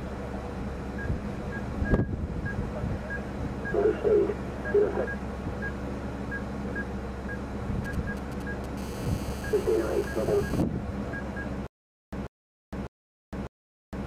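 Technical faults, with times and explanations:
7.85–8.66 s, GSM signalling bursts: galloping groups of short 217 Hz buzzes, roughly 15 dB below the signal. A nearby 2G phone is signalling, and the audio circuit rectifies its radio bursts.
8.77–10.63 s, GSM phone buzz: a steady, raspy 217 Hz buzz rich in harmonics, about 16 dB below the signal. A phone in a call transmits bursts, which the circuit demodulates.
11.67–14.06 s, stutter with silent gaps: a 142 ms fragment repeats four times, every 601 ms, with 459 ms of digital silence between, until the end. This is likely a stalled player replaying its last buffer, and the audio in between is lost.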